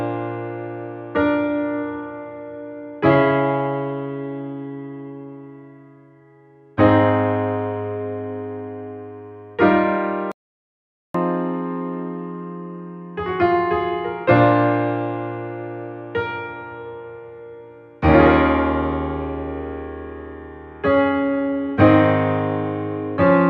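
The audio has a playback stall from 10.32 to 11.14 s: the sound cuts off mid-flow and leaves about 0.83 s of silence, most likely because the player ran short of data or its thread was blocked. A waveform shows a flat line there, and a spectrogram shows an empty vertical band across all frequencies.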